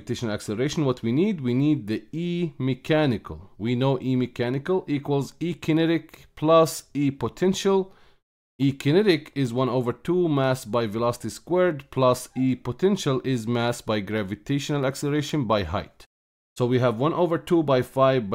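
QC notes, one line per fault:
15.29 s, bit error spike: a single bit flipped in memory or on a digital link, corrupting two consecutive samples so their values leapt by a power of two and then snapped straight back to the true waveform. The excursion peaks at about -19 dBFS and lasts only those two samples, so it comes out as one sharp, bright tick with energy smeared across the whole spectrum, bearing no relation to the surrounding sound.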